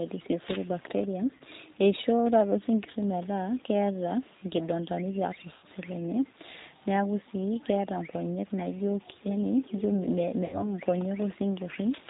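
From the start the speech is squeezed through the G.729 codec at 8 kbit/s. Nothing above 4 kHz survives, and the model-based rebuild of the voice leaves it noticeably rough and a bit synthetic for the whole clip.

Then there's VoIP packet loss concealed by the speech codec. At 1.38 s the decoder papers over a brief gap. From 5.54 to 5.66 s, about 90 ms go missing and get stretched out of the last sound as it fades. Right after "nkonyek naijo yaani ijo", from 10.46 to 10.74 s, a 70 ms loss smears the same way and leaves the voice weak as it recovers.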